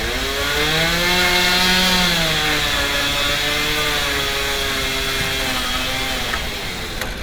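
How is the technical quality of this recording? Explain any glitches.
The technical quality of this recording holds up well, and there are no glitches to explain.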